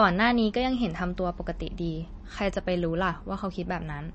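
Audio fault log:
Throughout, MP3 compression. The speech sounds watery and swirly, with nothing above about 8.3 kHz. That fits a low bitrate near 32 kbps, likely starving the encoder. It cut the treble and dropped weak frequency lines, which flicker between frames.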